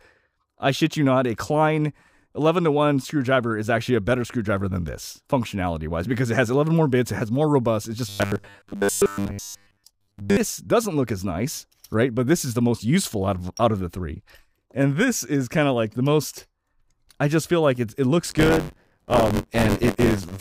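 From 8.09 to 10.38 s the sound turns rigid and metallic, with a steady buzz at 100 Hz laid over it that still loosely tracks the underlying material. This is robotic sound from repeated short buffers, likely caused by audio arriving too slowly, so the playback side keeps reusing a fragment of about 10 ms for most of the span while fresh audio is dropped. Each repeat imposes the fixed 100 Hz pitch.

From 18.25 s to the end of the clip at 20.40 s, a hard, rattling buzz at 93.8 Hz appears, present only while there is signal. This is buffer tearing: the writer and the hardware reader of the ring buffer have drifted, so their positions cross within each period. A small portion of every buffer holds audio from about 20 ms earlier, with abrupt joins on both sides, and the buzz rate fits a 512-sample buffer.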